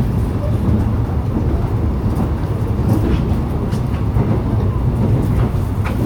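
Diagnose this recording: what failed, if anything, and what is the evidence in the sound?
No fault detected.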